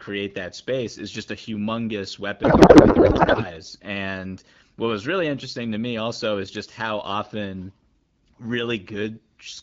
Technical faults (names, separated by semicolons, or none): codec payload misread